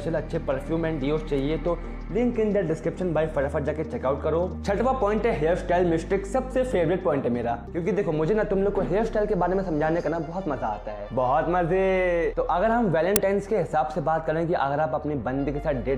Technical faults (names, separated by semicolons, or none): uninitialised buffer